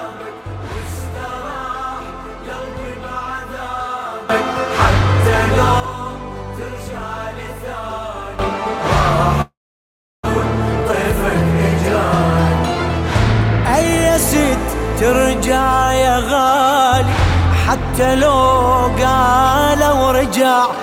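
A likely unramped digital gain change lifts the whole audio, background noise included, by about 13 dB at 4.30 s, dropping back at 5.8 s. A second sudden gain jump of about 12 dB at 8.39 s persists to the end. Packets then stop arriving in what is likely a long network dropout from 9.41 to 10.27 s. The receiver stretches the last sound into a fading buzz before near-silence, and about 0.6 s of audio is never heard, returning roughly 0.2 s later than before. Afterwards the jitter buffer holds too much and the receiver trims pitch-period slices to catch up. This jitter buffer speed-up runs the sound at 136% speed from 10.81 to 11.04 s, noticeably hurried at unchanged pitch, and at 103% from 15.12 to 17.80 s, each time removing roughly a tenth of a second.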